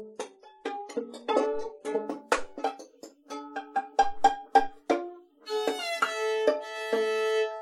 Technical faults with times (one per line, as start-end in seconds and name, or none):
0.00-2.00 adaptive stream starting at a low bitrate